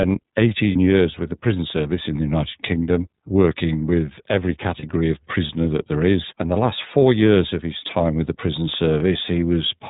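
Speech runs through the iLBC codec, with plainly audible damage: nothing above 4 kHz, a rough, synthetic edge, and independent frames consistent with 13.33 kbps, 30 ms mode. Lost iLBC frames occur at 0.72 s and 4.79 s, each about 30 ms and pointing to a single lost frame. Each gap is a held, buzzy vowel rather than silence, and the voice resumes almost at once rather than smearing.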